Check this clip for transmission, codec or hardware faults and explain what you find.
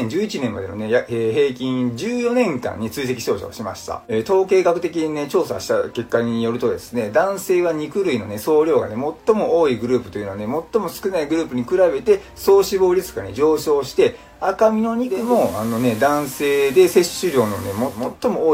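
One fault is audible: digital radio blending to analogue. From 15.00 s to 18.17 s, hiss rises to roughly 25 dB under the sound and the level shifts by about 2 dB. The receiver lost its digital stream and faded over 433 ms to the station's FM broadcast.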